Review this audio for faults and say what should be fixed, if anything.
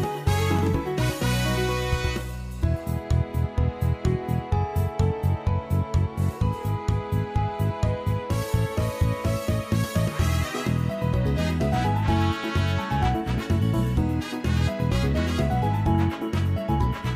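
Nothing here needs fixing.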